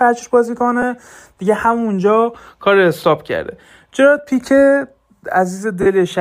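Lost LE Audio frames break the speech at 0.82 s and 4.18 s, each about one 10 ms frame, and at 5.82–5.86 s. The decoder refills each gap with sign-scrambled copies of the last spectrum, giving short noisy smears. They show as blurred vertical stripes on a spectrogram, with the longest fading out.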